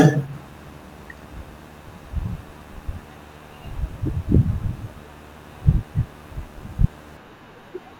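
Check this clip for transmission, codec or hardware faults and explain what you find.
There is one hardware fault. From 0.33 to 7.17 s, video or display buzz sits under the speech. A display or video cable couples into the audio, adding a 75 Hz buzz with hash above it, well below the speech level.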